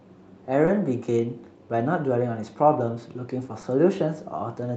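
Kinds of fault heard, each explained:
Short concealed packet loss: twice here, at about 0.65 to 0.69 s and 3.61 to 3.65 s, roughly 20 ms of the call didn't reach the decoder in time. The receiver patched each hole by carrying the preceding sound forward and then blending back into the real signal. Each patch comes across as a quick smear or wobble in the speech, over a call path whose top end stops near 8 kHz.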